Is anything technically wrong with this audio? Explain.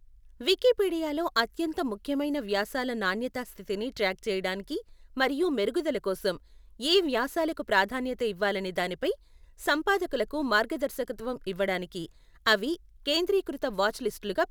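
Yes. Sample clock jitter runs through the whole recording. The converter's timing wanders by something like a few microseconds, so each sample lands slightly off its intended instant. Because that timing error turns into an amplitude error wherever the waveform is changing quickly, the damage follows the signal: a grainy hiss and roughness, roughly 30 dB below the speech, that thickens on loud passages and sharp high-frequency sounds and drops away completely in the pauses.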